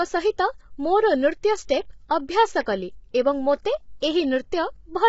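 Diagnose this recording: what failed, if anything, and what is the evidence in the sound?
The codec stage likely failed: heavy low-delay AAC compression, fitting roughly 16 kbps, leaves the speech rough and grainy throughout, with nothing above 7.7 kHz.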